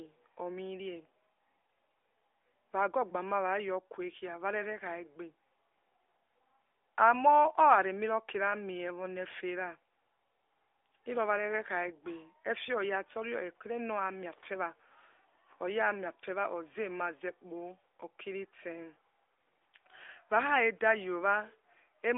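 No faults can be heard anywhere in the recording, and the sound carries the narrow band of an AMR narrowband mobile codec, with nothing above about 3.7 kHz and only light coding colour, which fits the 12.2 kbps AMR-NB mode.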